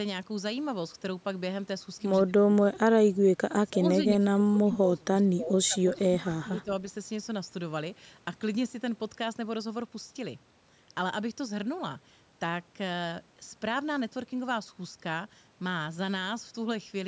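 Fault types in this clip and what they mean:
Speech suppressed in double talk: the speech sinks in level, by up to about 30 dB, in four stretches between 2.26 and 6.71 s, likely an echo canceller turning down the near talker during overlapping talk.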